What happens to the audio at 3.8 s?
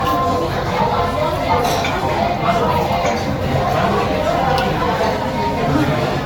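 At 3.8 s the sound carries generation loss, present across the whole clip rather than starting there: swirly, hollow smearing with blurred attacks and nothing above 19.2 kHz. It is likely from about five successive Vorbis re-encodes near 66 kbit/s, each quantising on a shifted frame grid, so it sounds worse than one encode at that rate.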